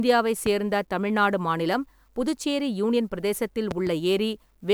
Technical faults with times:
0.46-0.49 loud pop
3.71-3.89 loud pop

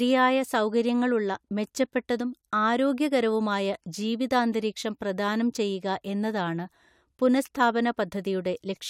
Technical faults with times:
none

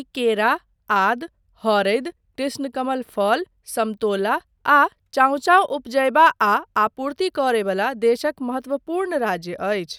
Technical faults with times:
none

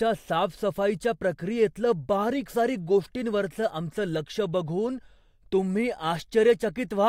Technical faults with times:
none

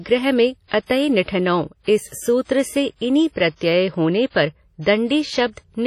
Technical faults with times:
0.00-5.87 WMA compression

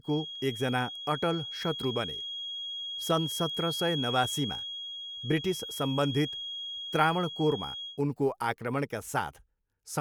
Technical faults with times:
0.00-8.01 feedback whistle

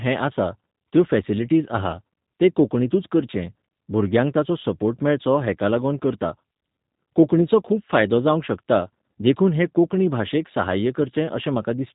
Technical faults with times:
0.00-11.95 G.729 codec

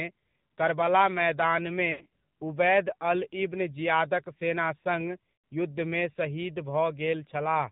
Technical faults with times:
0.00-7.72 AMR narrowband mobile codec
1.92-2.11 lost AMR speech frames
5.34-5.44 lost AMR speech frames

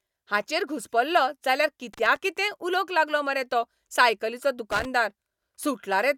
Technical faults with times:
1.93-2.16 loose connector crackle
4.71-4.85 loose connector crackle

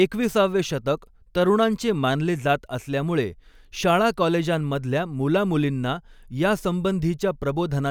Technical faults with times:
none

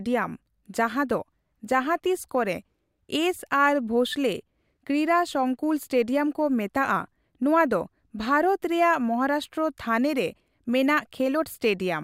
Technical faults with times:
none

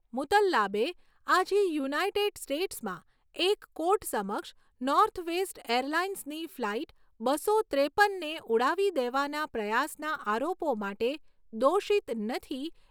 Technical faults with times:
none

